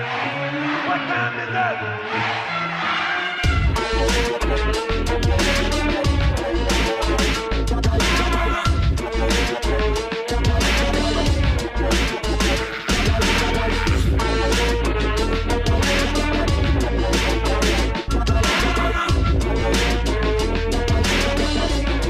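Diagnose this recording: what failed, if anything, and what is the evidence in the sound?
A network-stage fault: frames out of order at 19.59 to 19.62 s. Two adjacent short blocks, which fits single 10 ms frames, play swapped, giving a brief garbled flutter. A spectrogram shows vertical discontinuities there, with no lost time.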